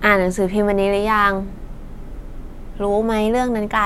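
No technical faults can be heard in this speech recording.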